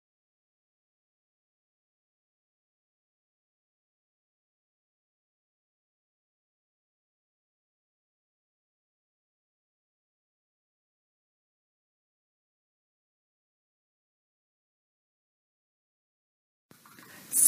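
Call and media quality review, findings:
No faults found in call and media quality review.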